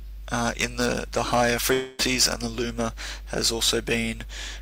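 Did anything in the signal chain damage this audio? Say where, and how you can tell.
Yes. Hard clipping runs through the whole clip. Every peak is cut flat, crackling with added high harmonics. The level was driven about 14 dB past what a converter or gain stage could pass, so only a small fraction of samples hit the ceiling.

A long network dropout, likely from the network, spans 1.73 to 2.01 s. About 260 ms of audio never arrived. The receiver filled the gap with a fading buzz or hiss that repeats the last sound, leaving no silence. The signal then resumes, missing that stretch.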